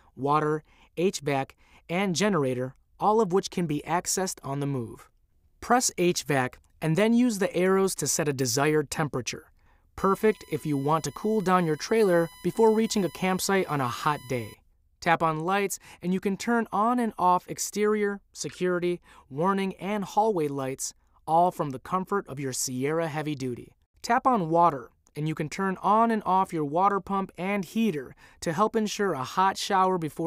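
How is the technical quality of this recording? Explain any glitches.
A steady 1 kHz whine sits under the sound from 9.98 to 14.54 s, about 25 dB below it. This is USB whine: the bus draws current in 1 ms frames, and that pulsing leaks through power or ground into the audio path as a fixed tone.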